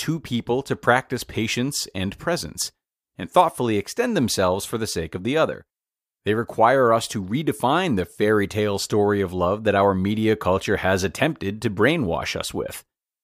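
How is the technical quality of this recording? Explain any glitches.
No glitches or faults are audible.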